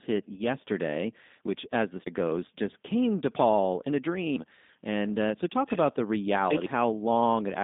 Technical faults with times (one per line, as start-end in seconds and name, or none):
0.00-7.63 G.729 codec
0.34-0.42 VoIP packet loss concealed by the speech codec
2.06 audio missing between chunks